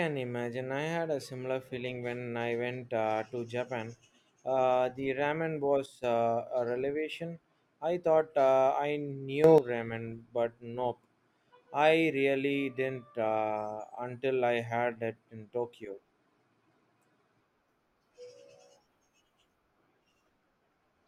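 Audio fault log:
5.86–6.04 s and 9.44–9.58 s, sudden gain jump: at 5.86 s the speech and its background noise drop together by about 8 dB with no fade, and at 9.44 s both leap up by about 10 dB just as abruptly. Because the floor moves in lockstep with the speech, this is not a change in delivery. The likely cause is a digital gain setting changed between one sample and the next without a ramp, so each level step lands instantly.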